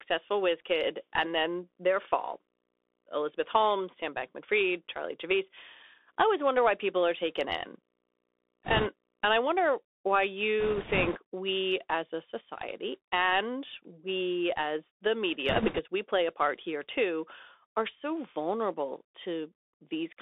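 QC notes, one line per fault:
Throughout, Bluetooth CVSD headset codec: sound is squeezed into about 300 Hz to 3.6 kHz, with scratchy s sounds and granular hiss, which fits 64 kbps CVSD.
0.00 to 9.71 s, video or display buzz: a faint 60 Hz buzz with hash on top, about -45 dB under the speech, from a screen coupling into the audio.
8.64 to 8.87 s, 10.60 to 11.17 s (just before "we as a society") and 15.49 to 15.80 s (between "and we as the" and "we play a part"), bit errors on a Bluetooth voice link: rushing crackle with no hard clicks, since CVSD bits carry equal small weight. Error rates ran at a few percent.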